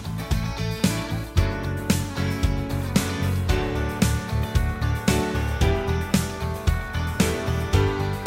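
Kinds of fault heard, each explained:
Clock drift buffer slips: about every 2.0 s from 0.8 s to 6.7 s, a short click breaks the sound. The likely cause is two clocks disagreeing by a couple of hundred parts per million, so a buffer between them periodically drops or repeats a small block of samples.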